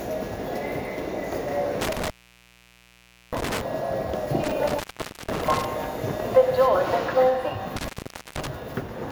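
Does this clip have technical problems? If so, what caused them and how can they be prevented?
Yes. The sound drops out three times, from 1.81 to 3.61 s, from 4.44 to 5.65 s, and from 7.76 to 8.47 s, with crackle at the edges of each gap and only faint hiss in between. This is intermittent contact: a loose plug or cable briefly loses its connection. The signal path stays open for about 1.23 s in the first event and about 0.49 s and 0.48 s in the later two. To prevent it, seat connectors firmly, use locking plugs where possible, and replace worn cables before recording.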